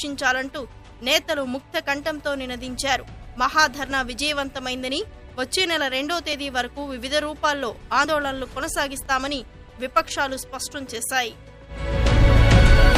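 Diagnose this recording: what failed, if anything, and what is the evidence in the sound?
At 9.06 s the sound jumps ahead about 10 ms with no gap, likely a dropped buffer (overrun) at the driver stage.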